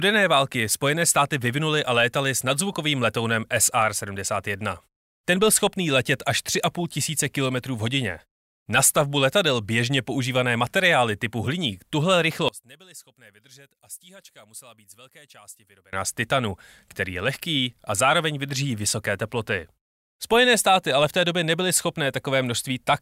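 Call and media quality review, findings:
Speech collapses to a faint residue from 12.49 to 15.93 s, level down about 23 dB. Likely one channel inverted: reversed polarity on one stereo side, so the shared centre content cancels on mono summing, leaving only the channel difference.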